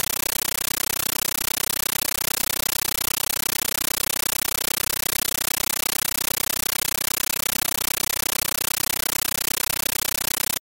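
Compressed stream played as audio runs throughout: an AC-3 bitstream, likely at 640 kbps, reaches the output undecoded and is treated as samples. Each frame becomes a 13.3 ms noise burst followed by silent padding, repeating at 31.25 Hz, so loud chattering static replaces the sounds entirely.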